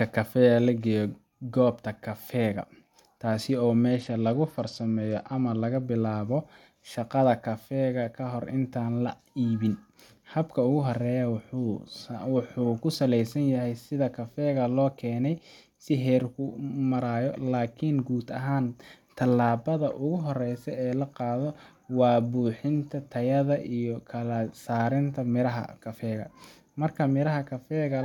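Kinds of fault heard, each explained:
Bluetooth SBC bit pool drop: From 3.91 to 5.82 s the speech suddenly loses its treble and takes on a gritty, grainy hiss, then snaps back. This is the encoder starving its upper sub-bands and quantising the rest coarsely, which fits a bit pool cut from 28 to 11, near 90 kbps. Unlike a plain low-pass filter, the dulling comes with added grit, and unlike packet loss, the sound never drops out.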